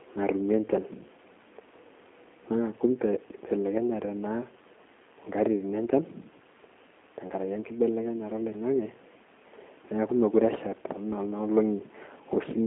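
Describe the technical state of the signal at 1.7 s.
At 1.7 s the speech is carrying G.729 codec damage, present across the whole clip. A sparse pulse-driven resynthesis gives a rough, synthetic edge, with nothing above about 3.7 kHz, which fits an 8 kbit/s line.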